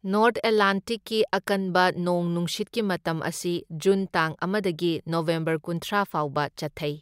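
At 5.82 s the speech has a repeated buffer: fresh audio did not reach the output in time, so the device played its last block of samples again, once. Each block lasts 1.33 ms, which fits a 64-sample buffer, so the repeat is far too short to hear as a stutter and comes through as a click or brief buzz. On a waveform the same tiny stretch appears twice, with a step at the join. A spectrogram shows a thin vertical broadband line, and the timing after it is shifted by about a millisecond and a half.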